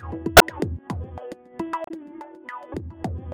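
Damaged data in a compressed stream at 0.35–0.42 s and 1.84–1.91 s: corrupted frames make the decoder misread and lose sync, leaving brief glitches heard as a chirp, squawk, click or short hole.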